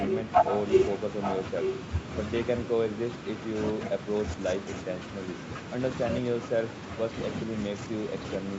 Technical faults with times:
0.07-2.18 echo leak
2.94-3.48 echo leak
4.02-4.06 echo leak
4.59-5.70 echo leak
6.42-7.14 echo leak
7.78-8.49 echo leak

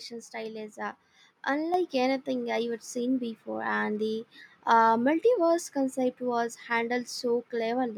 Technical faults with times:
1.74 microphone volume stepped up

